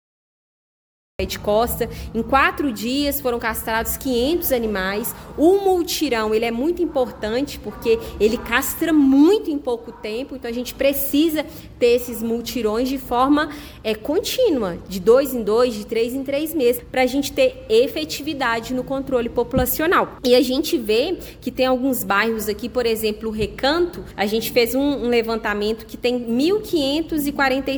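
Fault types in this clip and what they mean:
Cut-off start: capture began late, so flat digital silence runs until 1.19 s, then sound appears abruptly mid-event; the waveform jumps from zero, the spectrogram shows a hard vertical edge.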